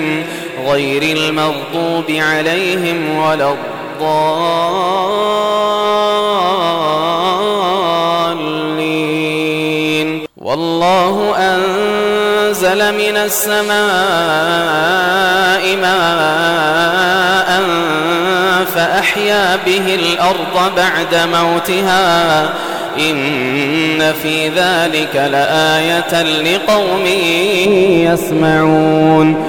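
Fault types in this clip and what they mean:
De-emphasis applied wrongly: from 27.65 s to the end of the clip at 29.48 s, the sound turns dull and muffled, as if a blanket had been thrown over it. A treble-cutting filter designed to reverse pre-emphasis has been applied where no boost existed to cancel, or applied a second time. The result is a smooth downward tilt across the upper range, leaving 10 kHz about 11 dB below 1 kHz, so brightness and crisp detail fall away together.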